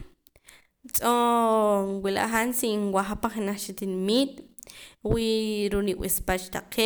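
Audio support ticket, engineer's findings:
Findings: no fault found in the speech audio.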